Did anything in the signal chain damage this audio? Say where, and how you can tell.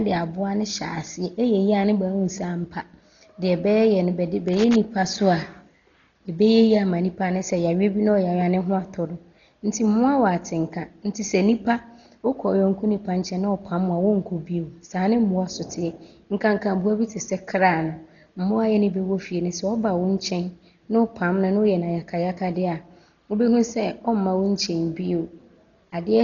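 Yes. Loose connector crackle, 4.48 to 4.76 s, between "no bɛde" and "so a": a faulty analogue contact rapidly breaking and remaking, chopping the signal into scratchy bursts.

Dolby Digital compression throughout, likely at the codec stage: nothing above 6.9 kHz, with heavy dull, fluttering noise from unfilled mantissas, which fits a starved bitrate around 32 kbps.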